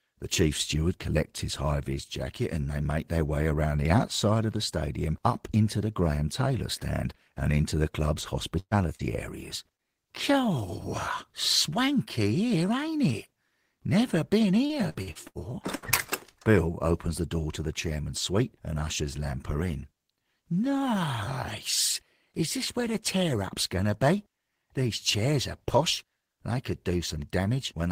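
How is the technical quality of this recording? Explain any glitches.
The recording is marred by network packet loss in two clusters, around 8.6 to 9.8 s and 14.7 to 15.9 s, which leaves the speech smeared, clipped and briefly robotic.

Burst of packet loss, 8.59 to 8.74 s and 15.75 to 15.85 s: a run of packets failed to arrive in time, costing about 120 ms in the first case and about 80 ms in the second. The receiver extended the last sound and faded it, so a short held buzz or hiss appears. In the first burst this dies to about 60 ms of silence. The speech then picks up further along, with a slice missing.

Short concealed packet loss, 8.95 to 9.02 s and 9.75 to 9.81 s: each time roughly 40 ms of audio never reached the decoder. The decoder bridged the hole by continuing the preceding sound for 30 to 40 ms and crossfading back. What you hear is a quick smear or wobble in the voice, and a brief consonant can drop out.

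Repeated packet loss (robotic sound), 14.66 to 15.38 s: over this 0.7 s stretch packets went missing five separate times, the longest gap 79 ms, about 240 ms lost in total. Concealment patched each hole, so about a third of the stretch is synthesised. The rapid alternation of real and patched audio makes the speech choppy, with pieces cut out.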